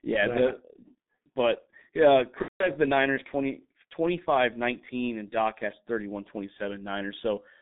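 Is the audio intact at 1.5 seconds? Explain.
No. At 1.5 seconds, as across the whole clip, the speech passes through a G.723.1 codec with heavy damage. The coder rebuilds the voice from a coarse model refreshed only every 30 ms, at a rate that fits about 6 kbit/s, within a 150 Hz to 3.7 kHz band. The speech sounds muffled and hoarse, with smeared consonants. A spectrogram shows a hard ceiling near 3.7 kHz, empty space above it, and blurred, blocky formant detail.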